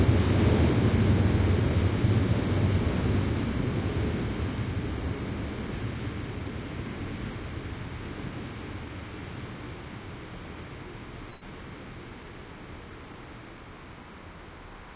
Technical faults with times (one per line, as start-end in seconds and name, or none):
11.30-11.43 burst of packet loss